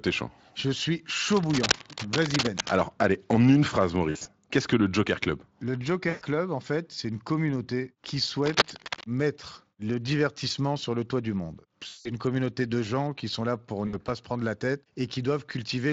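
From 1.28 to 2.72 s, and again from 8.44 to 9.06 s, a dense, uneven scratching rides over the speech at roughly the same loudness as the speech. This is cable scratch noise, likely from a worn cable or connector being moved so its contact resistance jumps about. Unlike a dropout, the speech underneath carries on intact. The noise is laid on top rather than replacing anything.

VoIP packet loss concealed by the speech codec occurs at 4.09 to 4.27 s, 6.09 to 6.24 s, 11.87 to 12.16 s and 13.87 to 13.95 s. In each of these gaps the decoder fills in for missing audio by extending what it last had, so the sound smears into a buzzy tone or coloured noise that fades instead of scratching. The first event has about 120 ms missing, spread in patchy runs over 160 ms. The later events lose about 120, 180 and 60 ms, which fits runs of 20 ms frames. The speech stays weak or distorted for a moment after each one, all within lightly coded Speex audio.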